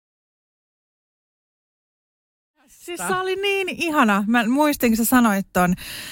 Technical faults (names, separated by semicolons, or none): none